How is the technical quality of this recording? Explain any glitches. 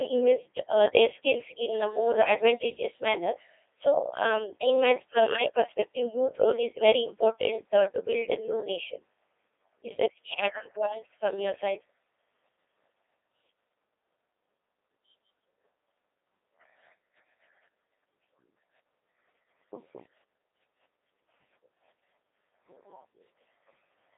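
Technical quality is poor. The whole recording has passed through a Codec 2 vocoder. Band-limited to roughly 300 Hz to 3.7 kHz with nothing above 3.8 kHz, it fits a 2.4 kbit/s mode. The decoder rebuilds speech from sine waves driven only by pitch, voicing and envelope data, discarding the original waveform. Heavy damage results: robotic, buzzy speech throughout.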